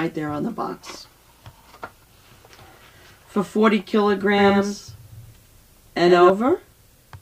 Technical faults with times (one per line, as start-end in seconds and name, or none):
4.38-6.30 doubled audio track